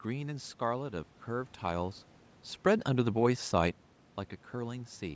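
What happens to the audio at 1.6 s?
Nothing goes wrong with the audio at 1.6 s; the change in loudness around then comes from the talker moving relative to the microphone, not from any fault in the system.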